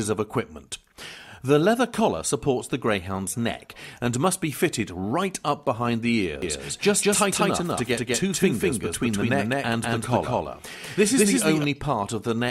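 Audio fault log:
6.42–11.64 s: doubled audio track. An equally loud full-band copy trails by roughly 200 ms, starting and stopping abruptly without decay, unlike echo. Likely a second, slower capture path or misaligned edit.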